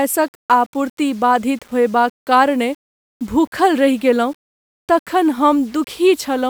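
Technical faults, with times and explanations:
Throughout, low bit depth without dither: the speech was likely stored with too few bits and simply rounded to the nearest step, with no dither to break up the error, consistent with about 7-bit samples. Because the rounding error tracks the waveform instead of forming steady hiss, it sits roughly 35 dB below the speech and rides along with it as a grainy, shifting distortion, turning quiet syllables and decaying tails rough and sputtery.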